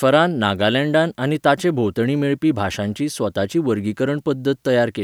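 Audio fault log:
No faults are logged for this speech clip.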